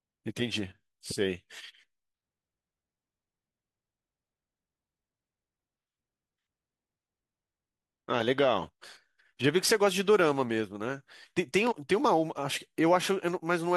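Compressed frames skipped at 11.71 to 11.73 s: the speech jumps forward as whole blocks of the encoded stream go unplayed, either missing from the file or rejected by the decoder as corrupt. About two frames drop out, roughly 50 ms of audio, which fits a frame length of 23.2 ms.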